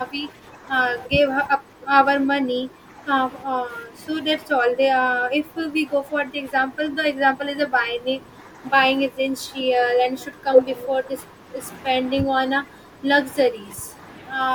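Speech suppressed in double talk, likely from the echo canceller failing to separate this side's talker from the loudspeaker echo, ducks the speech by about 10 dB at 0.11–0.7, 1.06–3.03, 3.46–4.04, 4.46–8.62, 9.09–11.58 and 12.02–13.07 s, and by about 15 dB at 13.5–14.01 s, leaving this speech clip patchy.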